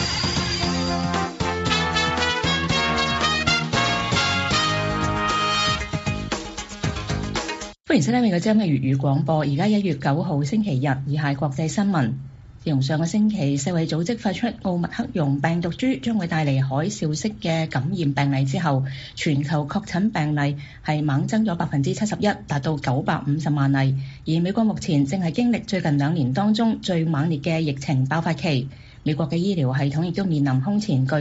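No technical fault is audible; the sound has passed through ordinary call microphone processing, which rolls off the lowest bass and leaves nothing above 8 kHz, as expected for that path.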